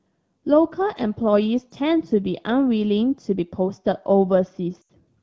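A short speech clip carried over an AMR wideband (HD Voice) link, which sounds clear at around 12.65 kbit/s. Lost AMR speech frames break it near the end. From 4.81 to 4.90 s the sound drops to near silence within two frames. The gap lasts about 80 ms, which fits four 20 ms frames. Radio errors corrupted those frames. The decoder repeated its last good pitch and vocal tract settings at falling gain to fill the hole.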